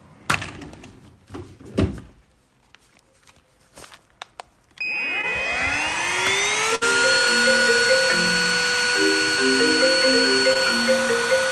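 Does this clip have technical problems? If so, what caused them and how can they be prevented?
Yes. There's short concealed packet loss at 5.21 to 5.25 s and again at 10.53 to 10.57 s. A packet arrived too late, so the receiver stretched the preceding sound over roughly 15 ms and blended back, leaving a brief smear with 20 ms missing. A larger jitter buffer or forward error correction would help here.

At 6.75 to 6.83 s there's a burst of packet loss. Several packets in a row were lost, so the decoder kept the last sound going and faded it for about 62 ms. The audio then jumps ahead, with 60 ms gone. A steadier network path or redundancy would prevent it.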